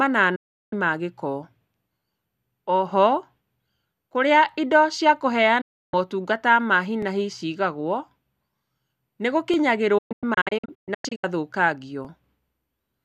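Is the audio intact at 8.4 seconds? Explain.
Yes, at 8.4 seconds the speech plays through intact, with no dropout, click, distortion or other fault at that point.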